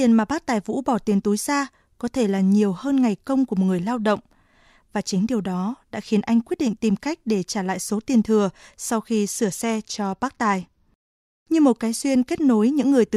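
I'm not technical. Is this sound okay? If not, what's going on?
No. From 9.32 to 11.44 seconds, between "tiền thừa sau khi" and "như một cái", the speech loses its crispness: the high, bright part of the sound goes dull and a gritty, sandy noise sits on top. This is a Bluetooth SBC bit pool drop. The wireless link got crowded, so the phone cut the amount of data it sent for the audio. With less data, the treble is dropped and the rest is stored roughly until the connection recovers.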